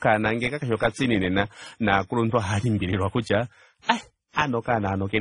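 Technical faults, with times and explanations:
Throughout, transcoding between lossy codecs: the speech stops sharply above 10.1 kHz and carries two different kinds of compression artefact at once. This fits a WMA encode near 32 kbit/s, likely re-encoded as AAC-LC near 28 kbit/s. Unlike a single low-bitrate pass, the damage is layered.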